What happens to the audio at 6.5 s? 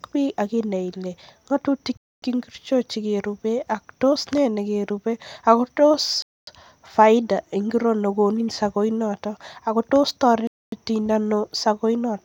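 At 6.22 s the speech stops dead for 250 ms, resuming at 6.47 s. This is a gap between chunks. The audio was delivered in 4-second pieces, and silence was inserted at the join. Nothing is lost. The flow is simply cut.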